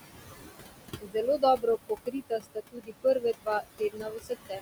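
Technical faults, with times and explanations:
Throughout: noise suppressor artifacts. The gating pulls the steady room noise, sitting about 8 dB under the speech, down by about 19 dB between phrases, so it sinks and swells with the talker. On a spectrogram the noise floor shows blotchy, flickering gaps.
0.98–1.16 s, 1.38–4.32 s, 4.49 s to the end: speech cut by the noise suppressor. Quiet speech was mistaken for noise and ducked by about 20, 21 and 12 dB, swallowing roughly a fifth of a second, around a second, and a tenth of a second of sound. The waveform shows sudden envelope dips; the spectrogram shows faint, missing speech energy.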